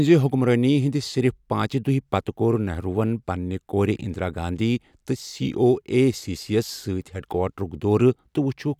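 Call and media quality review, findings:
No faults found in the speech clip. Nothing to flag for call or media quality.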